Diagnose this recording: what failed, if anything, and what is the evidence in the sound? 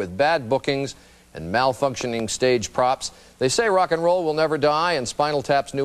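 Two sharp pops between 2.01 and 2.22 s, peaking a little above the level of the sound: a loud pop, likely a voltage pulse in the analogue wiring from a plug or switch.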